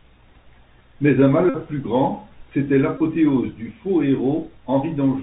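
It's a speech recording that went through a Bluetooth CVSD headset codec the whole way. Everything above 4 kHz is gone, the s sounds come out scratchy, and there's a grainy hiss sitting under the voice. That's the one-bit up/down coder with its adaptive step struggling to keep up, which fits the usual 64 kbps link. On top of that you get Bluetooth headset packet repeated faults at 0.35–0.37 s, 1.49–1.57 s and 2.98–3.02 s. Packets dropped and the chip replayed the last good one. Replaying every 3.75 ms gives a buzz near 267 Hz, and it's most obvious in the longest gap, about 49 ms at 1.49 s.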